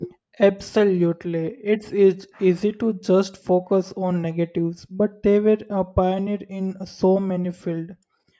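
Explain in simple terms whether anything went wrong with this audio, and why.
Nothing went wrong with this audio, because no fault can be heard anywhere in the speech.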